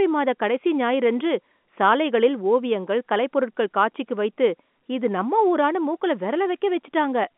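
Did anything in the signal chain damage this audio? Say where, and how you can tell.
No, the chain shows no damage; the speech sits in a telephone band of roughly 200 Hz to 3.5 kHz with nothing above 4 kHz, consistent with ordinary G.711 telephone coding working as intended.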